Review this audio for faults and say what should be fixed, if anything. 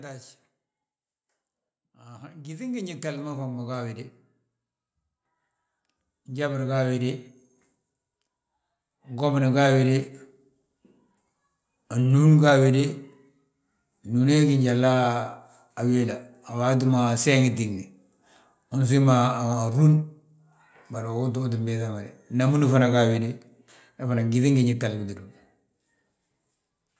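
Automatic gain rising occurs from 2.06 to 4.04 s, lifting the level by about 10 dB, and again from 6.26 to 7.27 s, by about 5 dB. The gain control judged the input too quiet and turned it up gradually. Voice and background swell together, unlike a talker leaning closer, where only the voice grows. To prevent it, set a steady input level near the target and slow or disable the automatic gain control.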